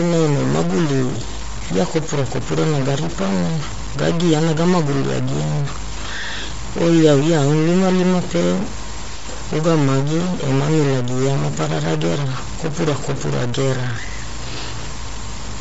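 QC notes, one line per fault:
throughout: stuck bit. The speech carries a distortion that follows the shape of the waveform rather than sitting beside it as a separate noise. The pauses are not clean. They fill with a gritty hiss. This is likely one data bit held at a fixed value. Every sample where that bit should differ is pushed off by a fixed step. Near silence, small values keep crossing zero, so the error becomes noise.
throughout: Bluetooth LC3 compression. The damage is plainly audible. Nothing is left above about 7.7 kHz, so the speech sounds dull and boxed in. Consonants and breaths have a grainy, breathy texture. That texture comes from the upper band being rebuilt from noise instead of real detail. This is likely the Bluetooth LE Audio codec at a low rate, which fits a 32 kbps stream in 10 ms frames. At that rate the encoder drops much of the high spectrum and patches it with filler.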